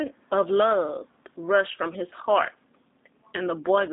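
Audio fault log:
throughout, G.729 codec: band cut to roughly 150 Hz–3.7 kHz, speech rough and synthetic from the low-bitrate rebuild; room noise sits about 42 dB down.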